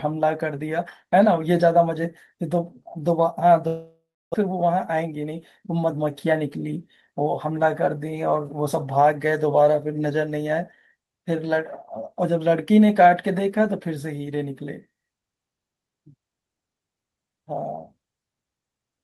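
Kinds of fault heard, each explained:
Long network dropout: At 3.67 s the audio stops, likely from a network gap, and fades into buzz or hiss then near-silence until 4.36 s, losing about 0.4 s.
Jitter buffer speed-up: From 4.48 to 6.34 s, speech runs 12% fast at the same pitch as the receiver trims tiny pitch-period chunks to shed roughly 0.2 s of built-up delay.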